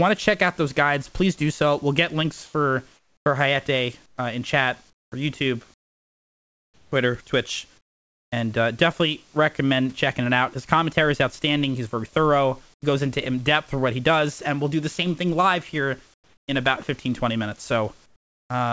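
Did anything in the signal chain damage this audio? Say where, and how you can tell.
Yes. In the call-processing stage, the room's background bed drops out in the gaps and is replaced by a flat, featureless hiss at 2.46–3.26 s, 4.06–6.92 s, 7.78–8.32 s (just before "and uh definitely recommend"), 12.74–12.82 s (between "very thorough" and "goes into in depth"), 16.14–16.48 s (after "same thing live here"), and 18.06–18.50 s. Where it can be measured, the bed falls by about 8 to 23 dB. This is comfort noise in place of the background, likely from discontinuous transmission: the sender stopped sending during pauses, and the receiver synthesised smooth noise instead of the real room sound.

At 6.90 s, right where the long comfort-noise stretch ends, the sound starts with a hard edge and no gentle rise. This is an onset clipped by the voice detector. The detector likely reacted late, so roughly the first 20 ms were never sent and were covered by synthetic noise, which left the sound beginning abruptly. 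It is also a call-processing fault, heard through a band that stops at 8 kHz, which fits a 64 kbps G.722 link.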